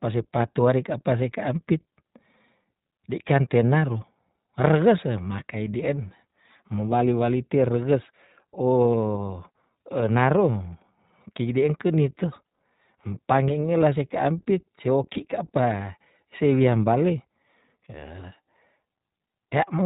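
A speech recording passed through the iLBC codec, and the coding damage is plainly audible across the whole clip. Nothing above 4 kHz survives, so the audio is narrowband and lacks high-frequency detail. The voice stays intelligible but has a rough, slightly synthetic texture because each frame's excitation is coded independently. The character fits iLBC's 20 ms frame mode at about 15.2 kbps. There are two short dropouts from lost iLBC frames, at 8.02 to 8.05 s and at 15.14 to 15.18 s. Each sounds like a single missing 20 ms frame. In each gap the decoder fills the hole by repeating the last pitch cycle blended with noise, which produces a brief held, faintly buzzy vowel-like sound. Because iLBC frames do not depend on their predecessors, the voice recovers cleanly right after each gap.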